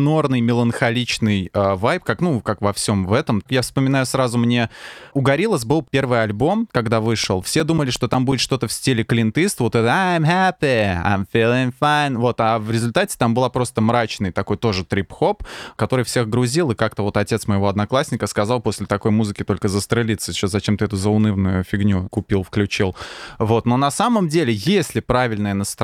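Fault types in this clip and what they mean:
CD scratch ticks: eleven brief ticks, about six a second, from 6.88 to 8.68 s, after "был первый альбом" and before "в стиле клинтыст вот", the longest about 7 ms. A disc blemish overwhelms error correction once per revolution, so the player patches or mutes those samples.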